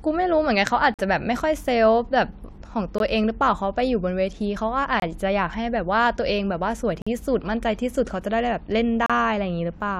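This speech clip has a gap between stream segments, heard as brief hard-edged silences every two seconds: 0.94–0.99, 2.98, 5.00–5.02, 7.02–7.07 and 9.06–9.10 s. Segment timestamps don't meet, so playback inserts 18 to 47 ms of silence. No audio is lost.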